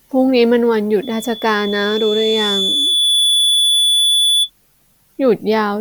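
Loudspeaker feedback squeal runs through this speech clip from 1.02 to 4.50 s: a single 3.4 kHz tone swells over roughly two seconds until it is about as loud as the speech, because the microphone is picking up its own loudspeaker and the loop gain exceeds one at that frequency.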